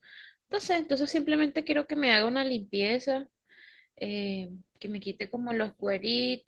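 Opus voice compression runs through the whole speech clip, with plainly audible damage. The low band sounds coarsely coded and slightly hoarse and robotic, with a muffled sound that fits hybrid SILK-plus-CELT coding at roughly 16 kbps, which is too few bits for clean excitation.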